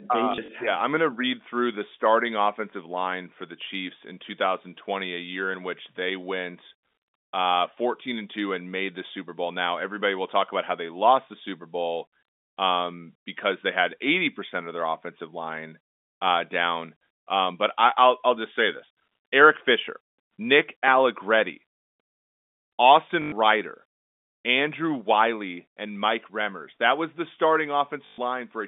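Just after "they uh", from 0.32 to 0.48 s, packet loss with the last packet repeated produces small blips: 60 ms of audio goes missing in isolated 20 ms gaps spread over 160 ms, each filled by replaying the previous packet. Longer runs at 23.22 to 23.32 s (100 ms) and 28.06 to 28.18 s (120 ms) buzz robotically at about 50 Hz, which fits 20 ms packets. On a waveform these runs appear as identical repeated blocks, and on a spectrogram as flat, frozen bands.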